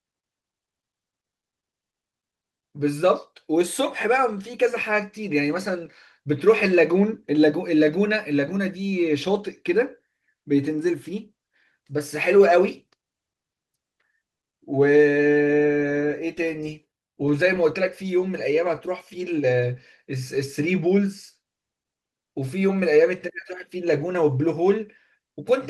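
No technical faults can be heard in the recording, so there are none to describe in time order.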